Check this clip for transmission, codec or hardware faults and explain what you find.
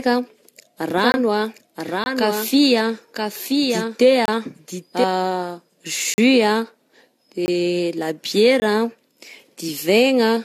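Three faults are audible in this speech recording: generation loss throughout, a doubled audio track in the first half, and six blocks of digital silence.

Generation loss runs the whole length. The speech sounds swirly, hollow and smeared, consonant attacks are blurred, and nothing is present above 14 kHz. The damage goes beyond what a single lossy pass would leave, which points to the audio having likely been decoded and re-encoded about three times, consistent with AAC at around 64 kbit/s. Each pass quantises again on a shifted frame grid, so the noise and spectral gaps pile up.

A doubled audio track appears from 0.98 s to 5.04 s. A second, full-band copy of the speech trails the original by about one second, roughly 5 dB quieter, with no reverberant tail or room colouring. It starts and stops abruptly at those points. The likely cause is the same signal being mixed in twice, once through a slower capture path, so the late copy sits on top of the original instead of sounding like a reflection.

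Six blocks of digital silence cut the sound abruptly. They fall at 1.12 to 1.14 s, 2.04 to 2.06 s, 4.26 to 4.28 s, 6.14 to 6.18 s, 7.46 to 7.48 s and 8.60 to 8.62 s. Most are about 20 ms long. The 6.14 s block lasts 40 ms and is a short hole. These are stretches where the audio drops out entirely.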